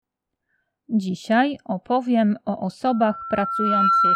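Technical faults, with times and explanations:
2.87–4.16 s: loudspeaker feedback squeal. The microphone picks up its own loudspeaker, and at 1.4 kHz the loop gain exceeds one, so that tone swells over about a second to roughly 5 dB above the sound. Spectrogram: one brightening horizontal line; waveform: a steadily swelling envelope.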